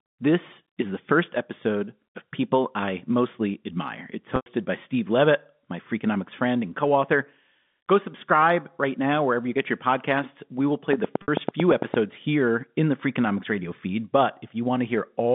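At 4.36 s the sound freezes into a held, buzzy tone that fades out within a gap of about 100 ms, until 4.46 s. This is packet loss with pitch repetition: the receiver bridged missing data by looping the last pitch period, which fits five lost 20 ms packets. From 10.93 to 11.95 s, after "will play" and before "here in the", about ten evenly spaced clicks tick at roughly 9 per second, some 15 dB above the signal. This train of clicks was likely caused by interference or a faulty connection injecting repeated pulses. Inside that stretch, at 11.22 s, a second 60 ms packet loss with pitch repetition adds a briefer buzzy hold, consistent with three lost packets. The narrow telephone band of the G.711 line is audible throughout.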